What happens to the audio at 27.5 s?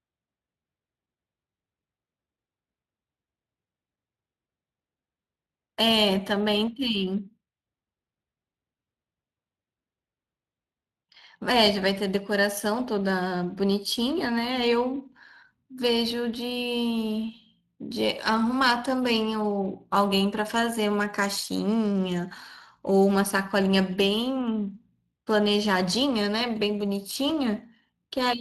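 At 27.5 s the speech carries the same Speex codec damage heard from the start of the clip, plainly audible rather than subtle. The excitation is coded coarsely, which fits a bitrate around 22 kbps, so speech sounds noisy and hoarse. Unlike a simple low-pass or band limit, which only dulls the sound, this roughness sits inside the speech itself.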